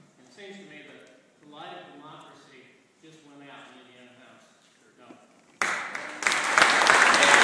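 No technical faults are audible in this audio.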